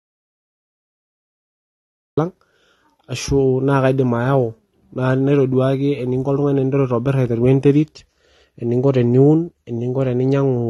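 The input signal was likely lost before the recording began, so the recorder wrote silence until it returned. The audio dropout to silence is already under way at the start: silence with no room tone, ending abruptly when speech arrives at 2.18 s.

Throughout, the speech carries plainly audible AAC compression, likely from AAC-LC at a rate that fits about 32 kbps. The encoder discards content above a 12.2 kHz cut-off and quantises coarsely, leaving the speech dull, smeared and fizzy on sibilants.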